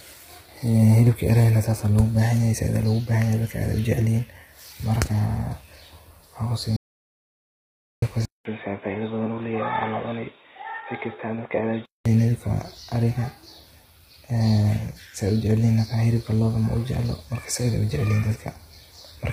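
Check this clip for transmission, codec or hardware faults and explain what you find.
Three faults are audible in this speech recording: codec damage throughout, a complete dropout, and a stretch captured on a poorer input.

Low-delay AAC compression runs through the whole clip and is likely AAC-ELD at a heavy setting, consistent with a bitrate around 24 kbps. Its short frames resolve pitch harmonics poorly, so the speech sounds rough and grainy, with noise filling between harmonics and nothing above 15.6 kHz.

An audio dropout to silence runs from 6.77 to 8.02 s, about 1.26 s long. The input was likely lost while recording continued, writing silence. The speech cuts out into total silence with no room tone, and that portion is gone.

An input switch to a poorer device occurs from 8.25 to 12.06 s, likely a change to a lower-grade microphone or headset call profile. It opens with a 200 ms silence. 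The band then stops at 3.8 kHz, making the speech dull and boxy, about 10 dB quieter, with a faint new noise floor well beneath it.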